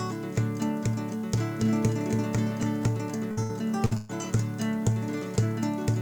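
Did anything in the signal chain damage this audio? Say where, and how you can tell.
Yes. From 1.34 to 2.88 s a doubled audio track appears. A full-band copy trails the original by about a third of a second and sits about 5 dB lower. It starts and stops abruptly, with no decay or room colour, which rules out a real echo. The likely cause is a duplicated routing or capture path at the playback or mixing stage.

From 3.31 to 4.12 s there is repeated packet loss, which sounds choppy and robotic. There are four gaps, the longest 120 ms, and roughly 37% of that span is concealment. The network dropped or delayed packets, and the decoder bridged each hole by extending the last sound. Those stretched fills, rather than clean silences, are what distinguish this from simple dropouts.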